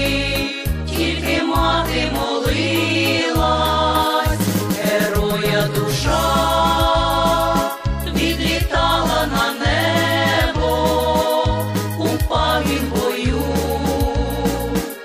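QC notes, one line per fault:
No faults heard anywhere in this clip.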